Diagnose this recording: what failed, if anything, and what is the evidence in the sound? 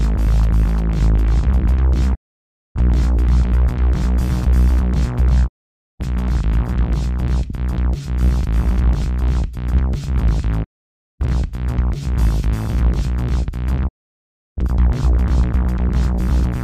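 Doubled audio track, throughout. A second full-band copy trails the original by about 400 ms, at roughly the same level. It has no decay and no room colour. The likely cause is a second, slower capture path, or an edit holding two copies out of step.

Digital broadcast dropout, at the reception stage. The sound fades out over 20 ms and goes silent at 2.14 to 2.81 s, 5.46 to 6.04 s, 10.63 to 11.25 s and 13.87 to 14.62 s. The receiver lost the signal or rejected corrupt frames and muted. That audio is gone.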